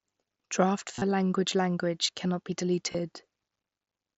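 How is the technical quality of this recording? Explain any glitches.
The recording has two brief glitches from concealed Bluetooth headset packet loss, heard over the lightly grainy sound of the mSBC headset codec, which stops at 8 kHz.

From 0.94 to 1.02 s, just before "language language cannot be", a buzzy, repeated texture replaces the sound. The losses are scattered across about 75 ms, with the longest continuous stretch around 30 ms. At 2.92 to 2.95 s, right after "language language cannot be", a shorter buzz lasts about 22 ms. In both places, voice packets between headset and phone were lost, and the receiver filled each gap by looping the closest-matching recent fragment of waveform. That looping produces the held, tonal buzz and the slight warble as real audio resumes.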